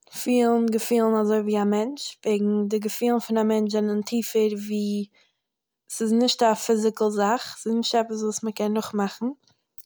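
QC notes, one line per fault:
Nothing to flag on this speech clip; no faults turned up anywhere in it.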